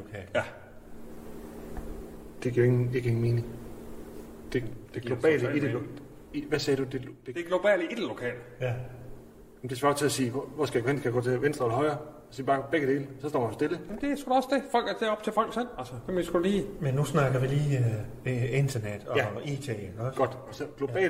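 No technical faults can be heard anywhere in the audio.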